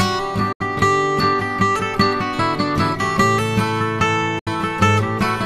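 At 0.52 s and again at 4.39 s there's a digital broadcast dropout: the receiver lost good frames and muted, fading out over about 8 ms into roughly 90 ms of silence, which fits three lost frames, before the sound picks up further along.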